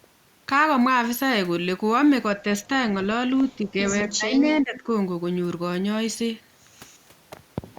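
A speech recording with speech suppressed in double talk in two places. From 3.56 to 3.77 s the speech level dips by roughly 10 dB. From 4.0 to 4.9 s it drops further, by around 15 dB at its deepest. The cause is likely an echo canceller that heard both ends talking at once. It could not tell this talker apart from loudspeaker echo. So it pulled the outgoing speech down.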